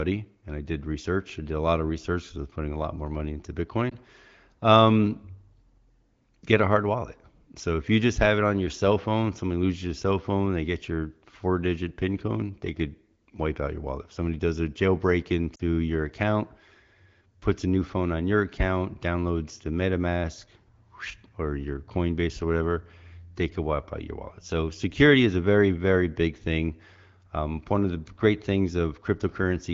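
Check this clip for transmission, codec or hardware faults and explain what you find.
There are two short dropouts from lost AMR speech frames, heard against a wideband AMR (HD Voice) signal whose light coding character fits a mid-to-high AMR-WB rate.

The first comes at 3.90–3.94 s, right after "lot more money into". The second runs 15.55–15.61 s, between "somebody does a jailbreak" and "your account". Corrupted radio frames were discarded, and the decoder repeated the last good pitch and vocal-tract parameters at falling gain. The first gap, one 20 ms frame, is a brief dip. The second, two frames totalling 40 ms, fades toward near silence before the sound recovers. On a spectrogram each shows as a short stretch of flattened, blurred harmonics and fading energy. The waveform shows a matching envelope dip.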